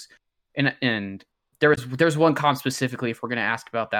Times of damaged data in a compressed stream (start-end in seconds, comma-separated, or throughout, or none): 1.74-1.78